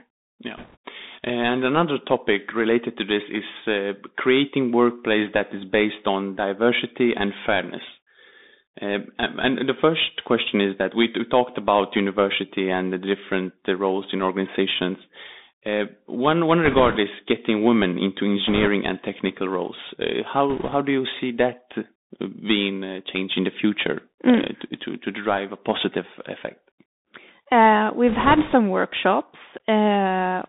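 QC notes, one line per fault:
Throughout: Bluetooth CVSD headset codec. The speech is confined to a telephone-style band of roughly 200 Hz to 3.7 kHz, so it sounds thin and boxed-in. This coarseness fits a 64 kbps CVSD link, where each sample is a single up-or-down bit with an adapting step size. Fast, loud high-frequency movement outruns that step and distorts, s sounds turn scratchy, and a grainy hiss sits under the speech.
0.57–0.77 s, 16.65–16.97 s, 18.47–18.68 s, 20.50–20.75 s, 28.08–28.54 s: bit errors on a Bluetooth voice link. In each of these short stretches, lasting between about 0.2 and 0.46 s, a rushing, crackly noise swells over the speech and then clears. The link flipped a few percent of the bits. Since every CVSD bit nudges the waveform by only one small step and the error decays away, the damage comes out as a wash of crackle rather than sharp, loud clicks.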